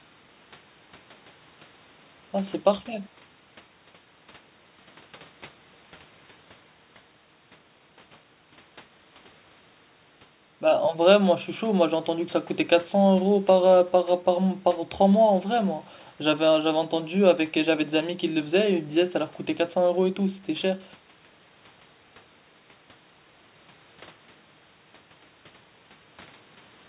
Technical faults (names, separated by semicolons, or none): none